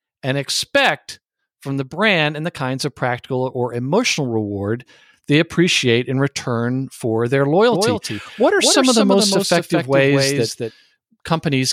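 A doubled audio track runs from 7.72 to 10.70 s, just after "in return for their": a second, full-band copy sounds roughly 200 ms late and about 5 dB quieter, starting and stopping abruptly, likely from a slower capture path.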